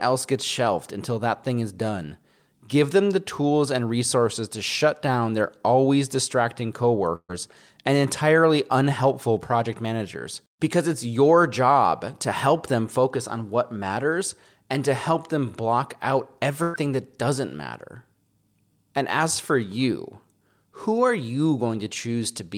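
At 7.15 to 7.31 s, just after "down their always distracting", there's a burst of packet loss: about 140 ms of speech never arrives, and the receiver papers over 133 ms by stretching the last sound and fading it, ending in roughly 50 ms of silence before "and entirely unhelpful project". Same story at 16.63 to 16.76 s after "help them block out": 120 ms lost, a 110 ms faded fill with no silence, then a jump to "that doesn't matter".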